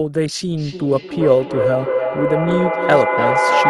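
From 0.57 s to the end, the speech is caught in a feedback echo between two devices. A second device in the room plays back what this microphone sent, and the microphone picks it up again, beyond the reach of its own echo canceller. Each phrase returns roughly every 0.3 s, thinner and more ringing each pass. The repeats build to about 2 dB above the direct speech. On a spectrogram this shows as stacked, evenly spaced copies of each syllable, narrowing toward resonant bands.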